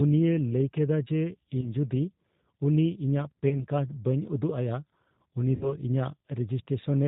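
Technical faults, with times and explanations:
throughout, G.729 codec: the 8 kbit/s codec rebuilds the speech from a vocal tract filter and a few pulses per frame and passes nothing above 4 kHz, so it sounds plainly rough and synthetic.
1.61–1.66 s after "ᱞᱟᱹᱭ ᱠᱮᱫᱟ ᱡᱮ", 3.49–3.64 s between "ᱩᱱᱤ ᱤᱧᱟᱹᱜ" and "ᱠᱟᱨᱰ ᱵᱟᱹᱧ ᱩᱫᱩᱜ ᱟᱭᱟ", and 5.55–5.73 s after "ᱵᱟᱹᱧ ᱩᱫᱩᱜ ᱟᱭᱟ ᱩᱱᱤ", VoIP packet loss concealed by the speech codec: 20, 20 and 60 ms of audio went missing, which fits one, one and three lost packets. The decoder stretched its last pitch and filter into a fading buzzy or noisy sound, and the speech stays distorted briefly after each gap.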